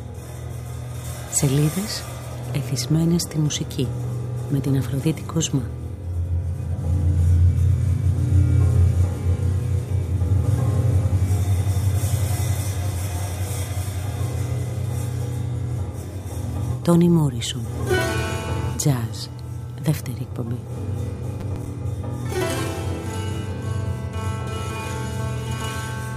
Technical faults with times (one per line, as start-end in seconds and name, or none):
21.40-21.74 processor overload crackle